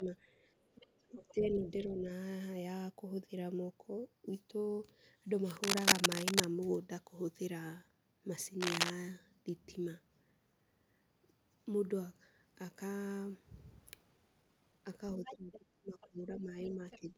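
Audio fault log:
0.0–0.12 s, speech suppressed in double talk: the opening sound dips briefly, by a few decibels, for about a tenth of a second. Likely an echo canceller ducking both talkers.
0.65–1.34 s, other side's voice leaking through: a second, faint voice sits well below the main speech, about 25 dB down. Likely residual loudspeaker echo the canceller missed.
1.11–2.1 s, speech suppressed in double talk: the speech drops by around 10 dB, over most of a second. Likely the canceller attenuating during overlap.
5.57–6.45 s, cable scratch noise: dense, uneven scratching rises above the speech, roughly 5 dB louder. Likely a worn connector or cable being moved.
8.61–8.91 s, cable scratch noise: a shorter rustling burst, again about 5 dB above the signal. Likely an unstable contact shifting.
15.18–17.18 s, speech suppressed in double talk: the speech sinks deeply, around 20 dB, for roughly one and a half seconds. 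Likely heavy suppression while both sides talk.
15.24–15.58 s, other side's voice leaking through: a second voice appears, about 15 dB below the speech. Likely uncancelled echo from the far end.
16.01–16.96 s, other side's voice leaking through: the second voice returns for nearly a second, about 20 dB down. Likely more residual loudspeaker echo.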